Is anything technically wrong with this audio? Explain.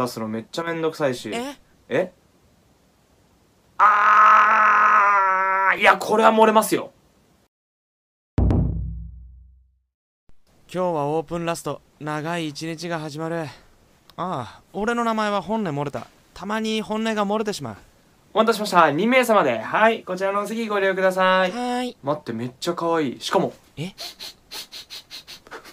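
Yes. From 0.62 to 0.67 s the level drops abruptly by about 6 dB and then returns. This is likely one channel drops out: losing one side halves the shared signal in the mono sum. Unlike a full dropout, the sound never falls to silence.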